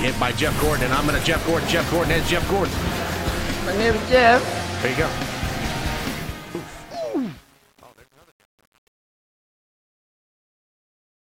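The sound fades out from about 6 s to the end at 11.3 s, and from 5.98 s there's truncation distortion on the fade. It's worst from 6.45 s to 11.28 s, where the tail turns gritty. That points to a gain stage holding about 9 bits with no dither.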